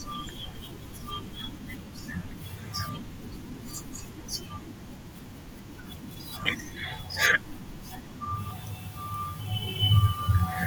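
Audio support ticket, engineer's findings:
Clock drift buffer slips: regular clicks in the speech, about four, every 2.36 s from 1.41 to 8.51 s. Likely cause is two unsynced device clocks roughly 150 ppm apart, dropping or repeating some 15 samples. Waveform shows step discontinuities; spectrogram shows thin broadband vertical lines.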